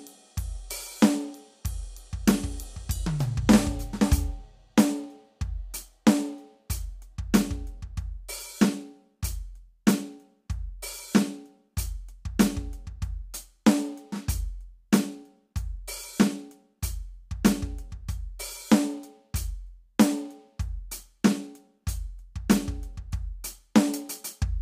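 No technical faults can be heard in this music.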